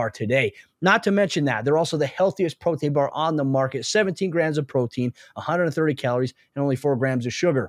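No technical faults can be heard anywhere in the recording.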